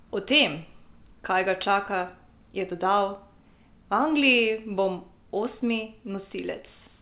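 Nothing technically wrong turns up in this speech clip; it simply has the narrow telephone sound of mu-law G.711 coding at 8 kHz, which is exactly how that path is meant to sound.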